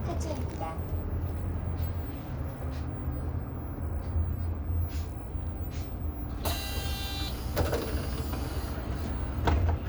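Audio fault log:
1.65 s and 3.29 s, DC step: at each time the waveform's zero line abruptly shifts by about -44 dBFS, producing a low thump while the sound carries on unchanged; a 20 Hz high-pass in the chain then lets each offset decay away.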